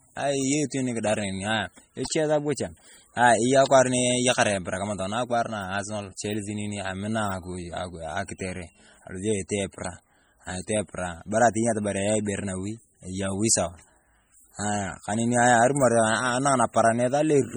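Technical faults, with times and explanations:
throughout, MP3 compression: heavy swirly, watery artefacts and chirpy sibilants as weak frequency lines drop in and out, likely from MP3 encoding at a rate fitting 32 kbps.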